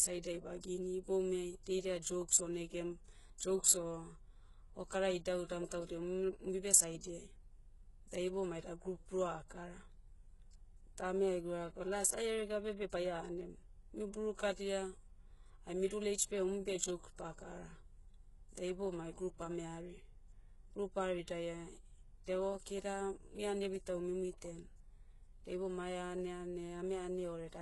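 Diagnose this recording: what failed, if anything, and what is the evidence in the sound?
The failure sits at the codec stage, and it runs through the whole speech clip. Nothing reaches above 11.5 kHz. The treble that remains sounds false, and s sounds come out gritty and lispy. The damage is heavy, which fits a very low bitrate, around 12 kbps. The likely cause is HE-AAC compression. Only the lower band is truly coded. The top is copied up from below and roughly shaped, so its harmonics never line up with the real ones.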